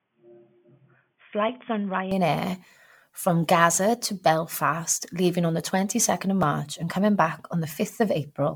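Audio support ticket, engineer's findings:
Generation loss, full clip: likely repeated MP3 re-encoding at 128 kbit/s, with swirl and smear pointing to a dozen or more passes. Quantisation noise and spectral holes stack up. Hollow, watery tone, blurred attacks, content cut above 19.9 kHz.

Input switched to a poorer device, 0.0–2.11 s: capture likely on a narrowband input, such as a headset call profile, before returning to the main mic. Dull, boxy sound, nothing above 3.5 kHz, about 5 dB quieter, faint added noise floor. No gap at the switch.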